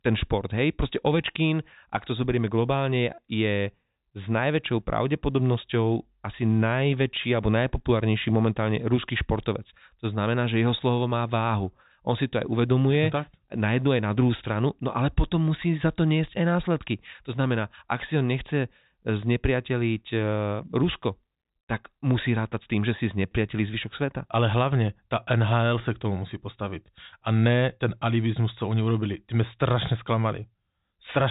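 No technical faults are audible.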